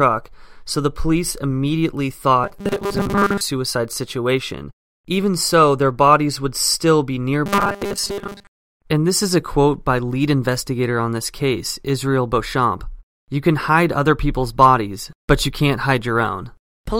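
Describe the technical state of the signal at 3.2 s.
Robotic sound from repeated short buffers covers 3.2 s, spanning 2.44 to 3.41 s just after "police immediately". A rigid 200 Hz metallic buzz follows the speech only roughly, which fits a 5 ms chunk being looped. The likely cause is late-arriving audio, with most of the real signal skipped.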